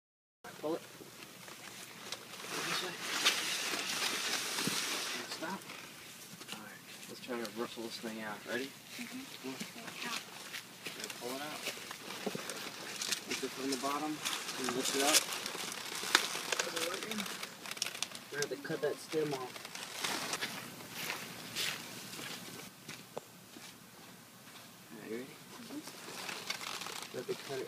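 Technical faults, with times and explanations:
20.04 to 22.68 s, sudden gain jump: sound and background noise rise together by about 6 dB with no ramp, likely from a gain setting applied abruptly, then fall back. The waveform shows a step-like block of doubled amplitude, and the spectrogram brightens uniformly across frequencies.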